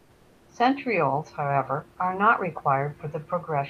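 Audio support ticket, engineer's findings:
Comfort noise in place of the background, 0.00–0.47 s. Opening half-second of steady, featureless hiss, about 2 dB quieter than the real room noise that follows. Likely sender-side discontinuous transmission, pointing to Opus DTX: no speech detected, so receiver synthesises shaped noise at a level about 35 dB below the loudest audio. Real room tone, about 32 dB below speech, returns with detail at 0.47 s.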